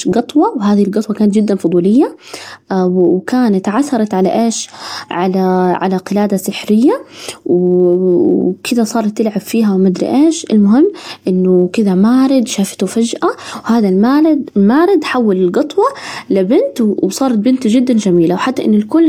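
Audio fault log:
throughout, block size mismatch (truncated): a steady buzz at about 46.9 Hz sits under the speech, because each block loses a sliver off its end before the next stage reads it, which fits 1024-sample blocks. So little is dropped that the pace stays effectively normal.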